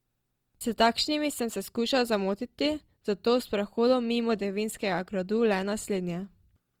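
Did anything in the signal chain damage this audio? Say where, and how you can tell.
Yes, at the codec stage, through the whole clip. The speech has a rough, grainy texture rather than the swirling holes of MP3, and the band still reaches about 20.3 kHz, so this is Opus compression, likely in its music (CELT) mode. That mode holds each band's energy but, short of bits, refills detail with folded or noise-like content, which is what roughens the tone here. The damage level fits a rate around 24 kbps.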